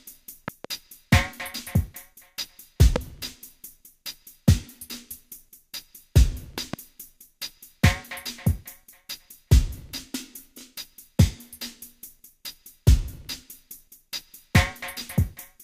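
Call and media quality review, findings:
Loud pops, three events: a double pop at 0.48–0.67 s, a single sharper one at 2.96–2.98 s, another double at 6.58–6.76 s. Peaks sit roughly 10 dB above the sound, the lone one nearer 15 dB, with the underlying audio running on beneath. Likely cause: voltage steps or spikes hitting the chain from a connector, switch, static discharge or driver glitch, shaped by the downstream circuitry into thumps. Worth checking cabling and the capture driver first.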